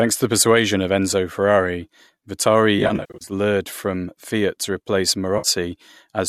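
From 2.79 to 3.32 s the speech turns smeared, noisy and phasey in broken patches, with about 320 ms of it gone in runs of up to roughly 70 ms. This is AAC frame loss with concealment: the decoder rebuilds missing frames from the last good spectrum with scrambled phase, and the gaps fit 10 ms frames, as the likely low-delay AAC coding would use. A shorter 60 ms smear follows "to replace", from 5.38 to 5.48 s.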